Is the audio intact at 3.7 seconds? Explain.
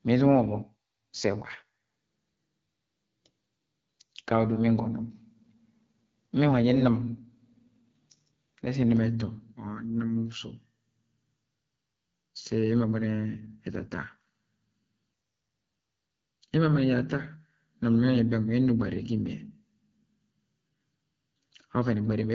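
No. At 3.7 seconds, as throughout the clip, the speech sounds rough and raspy, with nothing above 7.5 kHz. This is the AMR wideband (HD Voice) codec at a low rate, consistent with 8.85 kbit/s, where the pulse-driven vocal tract model lacks the bits to render speech cleanly.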